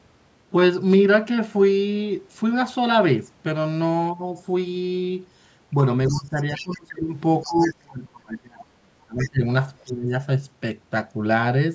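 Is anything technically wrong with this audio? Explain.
Yes, there's trouble in the second half of this speech clip.

Speech suppressed in double talk: from 6.08 to 7.15 s, 7.46 to 9.43 s and 9.84 to 10.11 s, the talker drops by about 20, 30 and 20 dB. Both ends were likely talking at once, so the echo canceller ducked everything.

Other side's voice leaking through: a second voice pokes in at 6.09 to 6.77 s, 7.42 to 7.74 s and 9.18 to 9.29 s, about 15 dB under the talker, plus a faint blip near 9.8 s. That's likely loudspeaker echo the canceller didn't fully remove.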